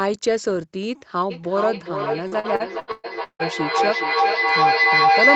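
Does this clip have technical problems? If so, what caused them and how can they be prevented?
Yes. A feedback howl runs from 1.3 s to the end of the clip, tone centred around 700 Hz, pulsing roughly every 0.4 s and peaking about 6 dB above the speech. Two devices in the same room on one call form a loop: a loudspeaker's output reaches the other microphone and comes back louder each trip, so the repeats narrow onto the frequency the loop favours and grow instead of fading. Using headphones or muting all but one device in the room prevents it.

Repeated packet loss (robotic sound) runs from 2.27 s to 3.42 s. The choppy texture points to about six separate dropouts, the longest around 0.16 s, with roughly 42% of that stretch filled by concealment that stretches the last received sound over each hole. Because the next gap arrives before the audio recovers, pieces go missing and what remains sounds robotic. 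A steadier, less congested network connection, such as wired rather than weak Wi-Fi, prevents it.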